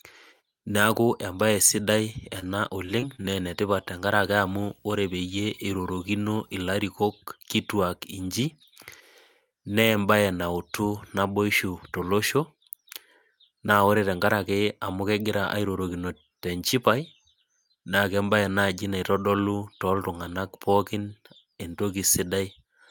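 Repeated packet loss (robotic sound) from 2.39 to 3.26 s: six short holes, none longer than 23 ms, are bridged by stretching the previous sound, giving choppy speech with pieces missing. Video or display buzz from 4.18 to 6.77 s: a faint hum at 59.94 Hz with hash and a thin 15.7 kHz whine, from a display or video cable coupling into the audio.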